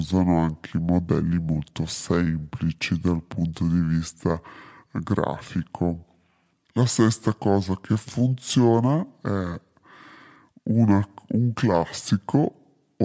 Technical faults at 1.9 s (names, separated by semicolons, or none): wrong sample rate